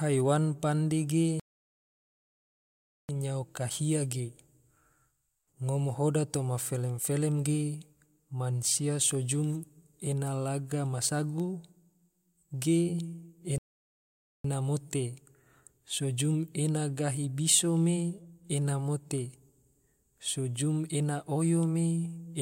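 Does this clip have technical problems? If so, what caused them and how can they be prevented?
Yes. The speech cuts to silence twice: from 1.40 to 3.09 s, a gap of about 1.69 s, and from 13.58 to 14.44 s, about 0.86 s. Each break lands mid-flow with no fade. These are playback stalls, likely caused by the player's buffer running dry or its audio thread being blocked, so output halts until data arrives again. Larger playback buffering and a higher-priority audio thread would prevent this.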